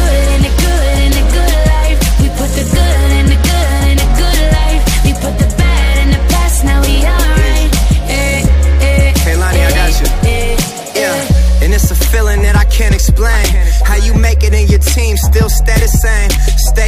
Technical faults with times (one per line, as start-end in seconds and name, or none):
none